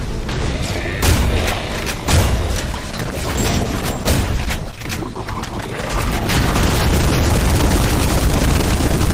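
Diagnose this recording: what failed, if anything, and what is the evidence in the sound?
From 2.72 s onward codec artefacts abruptly rise, with no gap. At the network stage, an adaptive stream at a lower bitrate fits an Opus drop to 16 kbit/s.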